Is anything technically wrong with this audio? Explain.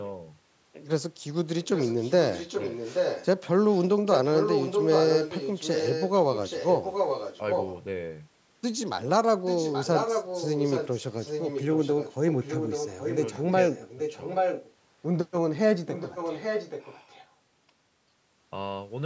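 Yes, there's an echo leak running through the speech. A delayed copy of the talker trails about 828 ms behind, at 1.62–3.26 s, 3.70–3.82 s, 4.09–7.75 s, 9.45–10.97 s, 11.2–13.45 s, 13.68–14.73 s and 15.86–17.27 s. Most of these are loud, only about 5 to 10 dB under the direct speech, while the brief one near 3.7 s is barely there. The likely cause is a speakerphone on the far end whose echo canceller let its own playback back into the microphone and returned it down the line.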